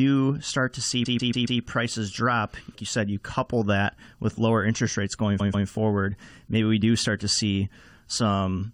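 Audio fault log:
1.05–1.60 s repeated frames: after "start to see", a 139 ms block replays four extra times, a stutter; the waveform shows identical copies, adding 0.56 s.
5.39–5.67 s repeated frames: after "lower interest rates going", the same 139 ms block plays twice more; the spectrogram shows matching slices, adding 0.28 s.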